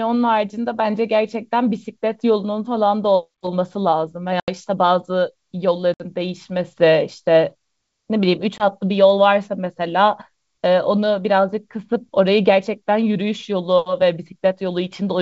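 This speech clip suffers packet loss on an ADPCM call carried over G.722 wideband coding. Packets went missing and were filled with silence, so the decoder's adaptive predictor and step size drifted from the sender's. Hard-edged gaps open at 4.40–4.50 s (80 ms lost), 5.94–6.02 s (60 ms) and 8.58–8.65 s (20 ms, roughly one packet). After each gap the speech resumes with brief, slight distortion before the decoder resynchronises.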